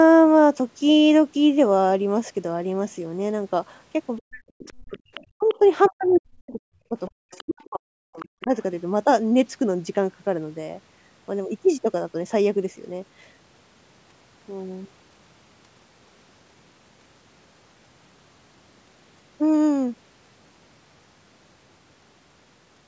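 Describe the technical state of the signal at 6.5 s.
At 6.5 s the speech falls within 5.37 to 8.54 s, where it dips and breaks up (about two seconds affected, roughly 40 dB down at worst). Likely speech suppressed in double talk: the echo canceller ducks the talker during far-side speech, leaving ragged fades rather than clean packet-loss gaps.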